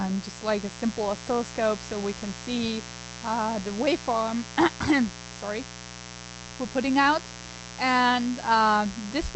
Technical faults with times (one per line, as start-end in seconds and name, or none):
0.00-9.36 mains buzz